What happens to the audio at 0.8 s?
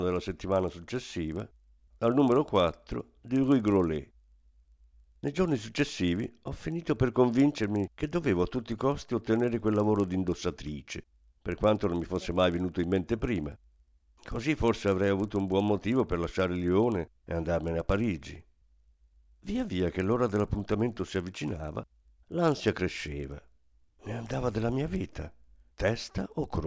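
At 0.8 s, as everywhere in the speech, the resampler is restarted on every block. The converter treats each 40 ms block in isolation during a conversion from 48 kHz down to 16 kHz. At each block edge it has no real neighbouring samples to work from, so a small error lands there. Because the errors arrive every 40 ms, they form a steady 25 Hz train of ticks that is heard only while speech is present.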